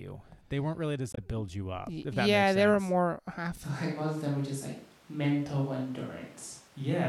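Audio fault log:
1.11–1.18 s, damaged data in a compressed stream: between "weren't really" and "to build you up", corrupted frames make the decoder lose sync, giving a brief disturbance.
3.64 s to end, switch to a distant microphone: speech turns suddenly roomy and thin at a similar level, with background noise about 30 dB down, likely from a farther microphone.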